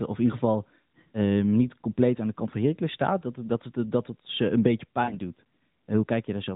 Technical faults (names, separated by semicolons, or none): lost AMR speech frames